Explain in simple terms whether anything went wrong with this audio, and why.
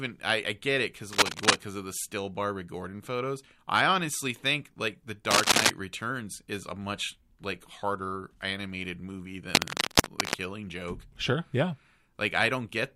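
Cable scratch noise, a rough crackling burst over the speech, appears at 1.13–1.57, 5.31–5.70 (loudest) and 9.55–10.34 s, likely from a worn cable or connector being moved.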